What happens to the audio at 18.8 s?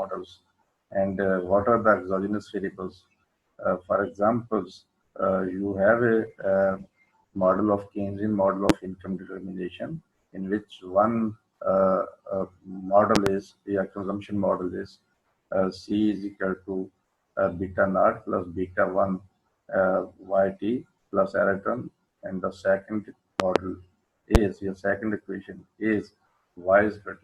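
Nothing goes wrong at 18.8 s; the audio plays through that moment intact, with no dropout, click, glitch or other fault.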